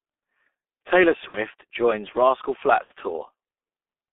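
The whole speech clip carries heavy G.723.1 codec damage. The band runs only from about 250 Hz to 3.5 kHz. The sound fits the 6.3 kbit/s mode. The slow voice model smears consonants. The voice sounds muffled and hoarse.

VoIP packet loss concealed by the speech codec occurs twice, at 1.28 to 1.38 s and at 2.84 to 2.93 s. Each gap fits two lost 30 ms frames. The decoder stretches the last sound into a buzzy tone or coloured noise that fades. Recovery is weak or distorted.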